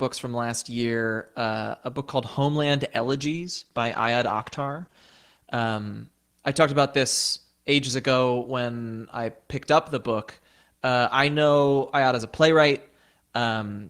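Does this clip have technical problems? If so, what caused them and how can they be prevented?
Yes. From 2.99 s to 6.03 s the speech turns rough and muffled, worst for about 2 s in the middle, then clears. This is a call bitrate drop. The call's bandwidth estimate fell, so the encoder coded more coarsely and trimmed the high frequencies, which fits a fall from about 32 to 14 kbps. Unlike packet loss, the audio stays continuous throughout, with no gaps, clicks or repeated fragments. Only the clarity sags and recovers. A more stable network link, or a higher minimum bitrate floor, would prevent this.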